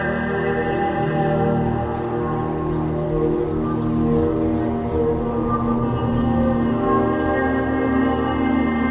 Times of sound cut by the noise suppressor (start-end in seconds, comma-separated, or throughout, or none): none